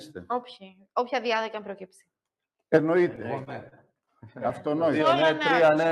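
From 3.01 to 4.09 s, repeated stalls (stutter): the jitter buffer ran dry six times, with each gap of up to 30 ms concealed by extended sound, so the audio drags and stutters.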